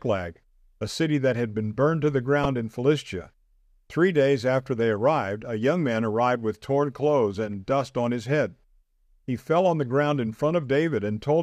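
At 2.44 s the speech is interrupted by a brief blip caused by damaged data in a compressed stream. Corrupted bytes reached the decoder there, so it misread the affected frame, lost sync, and recovered by locking onto the next valid frame header.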